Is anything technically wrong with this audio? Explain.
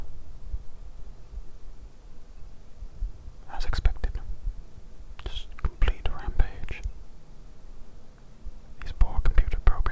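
No, nothing's wrong here. It has simply come over a call connection, and the top end stops at 8 kHz, which fits a wideband codec like G.722 doing its ordinary job.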